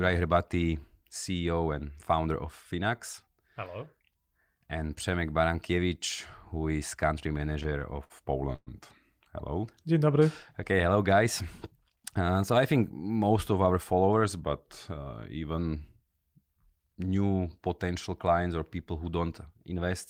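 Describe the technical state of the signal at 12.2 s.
At 12.2 s you're inside a jitter buffer speed-up, running 11.72 to 12.35 s: the receiver trimmed about 70 ms of pitch-period chunks, so the speech hurries along at 110% without changing pitch.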